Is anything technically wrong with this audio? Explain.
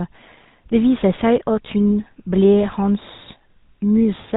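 Yes. Throughout the speech, the GSM full-rate codec is plainly audible. It models the vocal tract and excites it with regularly spaced pulses, keeping only a third of the excitation, which fits 13 kbps full-rate coding. Nothing above 4 kHz survives, and the voice takes on a buzzy, gravelly roughness.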